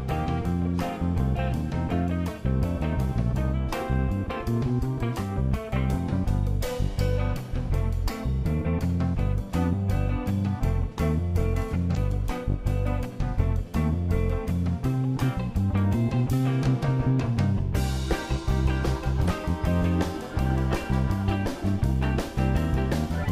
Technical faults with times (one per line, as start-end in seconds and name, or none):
11.93-11.97 damaged data in a compressed stream
19.24-19.28 damaged data in a compressed stream